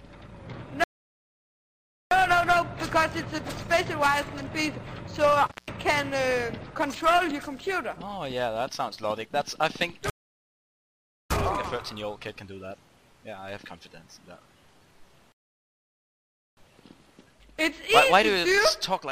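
At 0.84 s the audio halts in a rebuffering stall: the player's downloaded buffer ran dry, leaving 1.27 s of flat, empty waveform and a blank spectrogram band. The sound then resumes exactly where it stopped, adding time without losing any content.

Between 5.46 and 5.71 s an intermittent contact opens the line for about 162 ms. The signal drops out with crackle at each edge, visible as vertical broadband spikes framing a faint low-level hiss floor.

Two more rebuffering stalls follow, from 10.10 to 11.31 s (1.20 s added) and from 15.32 to 16.57 s (1.25 s added). Each is a clean silent gap with no clicks, and playback picks up seamlessly.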